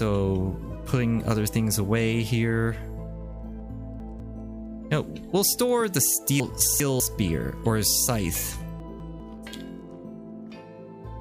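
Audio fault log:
3.6–4.2 s, 6.4–7.0 s, 8.8–9.2 s: chunks out of order. In each span a 200 ms block of audio plays late, two blocks late in the first two spans and one block late in the third. Nothing is lost, but the sequence jumbles and there are three hard joins.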